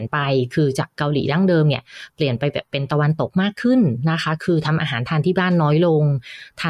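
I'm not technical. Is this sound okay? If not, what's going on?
Yes, this one's fine; nothing in the recording sounds broken or out of place, so there's nothing to worry about.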